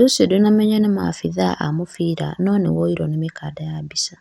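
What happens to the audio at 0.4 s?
At 0.4 s the speech is dull and grainy. That sound runs through the whole clip, not just this moment. The likely cause is MP2 compression at a low bitrate, in the region of 80 kbps. The codec splits the sound into narrow sub-bands and rations bits between them. Starved bands drop out or flicker, and the rest are coarsely quantised. The result is a plainly audible gurgling distortion, with nothing above 16.5 kHz.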